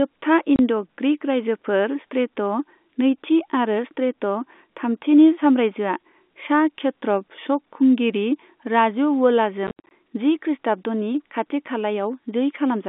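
At 0.56 s a 30 ms hole of silence drops out of the speech, and from 9.67 to 9.91 s roughly 170 ms goes missing in gaps up to 80 ms. This is packet loss filled with silence: the gaps fit 10 ms packets, with hard edges, and they sit over G.711 telephone-band audio.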